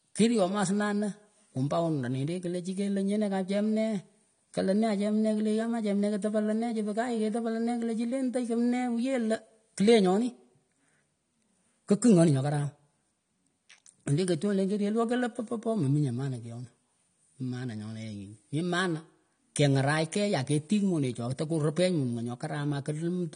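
AAC compression runs through the whole of this speech recording, with plainly audible damage from start to finish. Nothing survives above about 9.7 kHz, so the top octave is missing and sibilants sound dull and smeared. The likely cause is a low-bitrate AAC-LC encode, which fits roughly 32 kbps: starved of bits, the encoder lowers its cut-off and thins the spectrum, leaving a watery, fizzy texture on sustained sounds.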